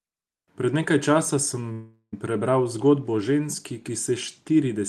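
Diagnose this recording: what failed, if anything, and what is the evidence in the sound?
A call audio freeze at the network and jitter-buffer stage is the likely cause: from 1.72 to 2.14 s, a gap of about 0.4 s is inserted into the speech and filled by a fading buzz or hiss that drops to silence for roughly 70 ms. Speech then resumes intact, about 0.4 s later.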